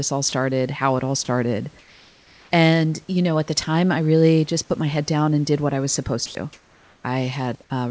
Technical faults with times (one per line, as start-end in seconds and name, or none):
0.29-0.32 sound dropped by the voice detector
1.79-2.51 comfort noise in place of the background
6.26-6.35 sound dropped by the voice detector
6.53-7.04 comfort noise in place of the background